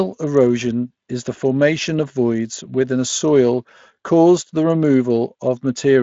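A listen to this speech clip turned up nothing that stood out as a technical problem.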